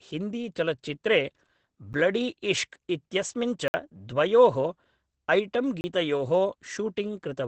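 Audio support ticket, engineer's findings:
Opus voice compression, whole clip: speech muffled, hoarse, faintly robotic; nothing above 8.6 kHz. Sound fits SILK-mode wideband coding at roughly 12 kbps. Coarse excitation coding and band limit at that rate strip top end and texture.

Block of digital silence: hard dropouts at 1.93 s (9 ms tick, just before "ब्लडीइश्श्क् इत्यस्मिन्"), 3.68–3.74 s (60 ms hole, just after those words), 5.81–5.84 s (30 ms). Zero-filled output buffer, probably an underrun. Abrupt edges, no fade.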